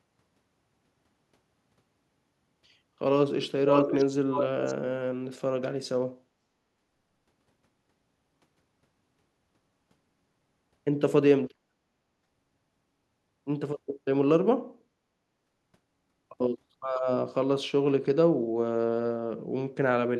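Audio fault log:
3.69–4.05 s and 4.34–4.75 s, echo leak: a delayed copy of the speech returns 561 ms late, first about as loud as the talker, then somewhat quieter. Likely a far-end loudspeaker's sound reaching its microphone and slipping past an incomplete echo canceller.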